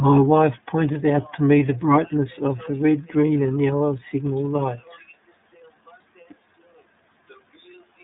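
Throughout, the speech carries iLBC codec damage. Content stops sharply at 3.7 kHz and below 150 Hz, giving a flat spectrogram ceiling. Each 30 ms frame is coded independently, which fits the 13.33 kbps mode, leaving a plainly rough, synthetic texture.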